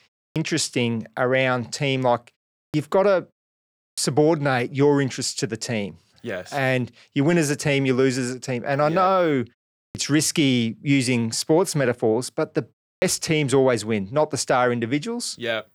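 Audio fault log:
0.3, 2.68, 3.92, 9.89 and 12.96 s: clipped start after a pause. Each time, about 55 to 60 ms of speech onset goes missing after a silence of 0.3 to 0.68 s. The output path sleeps in silence and wakes late. Sound therefore bursts in abruptly, minus its first sounds.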